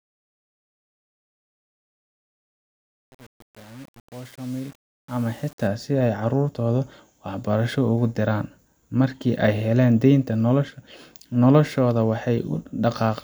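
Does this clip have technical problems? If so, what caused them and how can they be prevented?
Yes. There is truncation distortion on the fade-in, from 0.00 to 5.67 s. Its quiet opening is not clean, though. The sound is gritty. The low-level waveform has collapsed into coarse square steps, which fits a fade stage keeping only 7 bits. No dither was added. The grit stays across the whole span. To prevent it, run fades at full bit depth and add dither before reducing word length.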